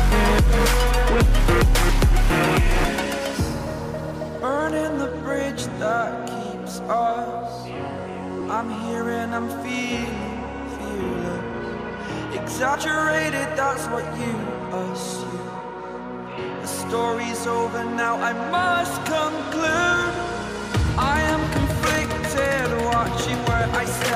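Whole compressed frames were dropped, either missing from the file or rejected by the decoder as damaged, so playback jumps forward instead of rendering them. These compressed frames skipped occur at 8.40 s, where about one frame's worth of audio, roughly 30 ms, vanishes, and at 12.74 s, where about three frames, roughly 70 ms, are lost. The skip sizes fit a frame of about 26 ms.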